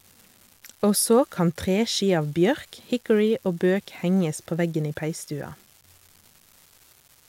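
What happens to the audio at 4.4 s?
At 4.4 s the speech carries the same steady crackle heard throughout the clip: an unreliable data bit, one marginal line flipping in random samples, each flip a fixed spike of about -35 dBFS. A waveform shows scattered equal-height spikes, continuing through pauses; a spectrogram shows broadband speckle.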